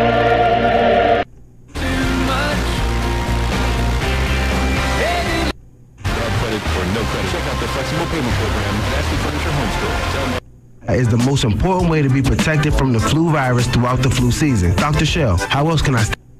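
From start to finish there's a block size mismatch (truncated): each block's tail gets dropped, giving a steady buzz near 92 Hz, though the playback speed barely changes.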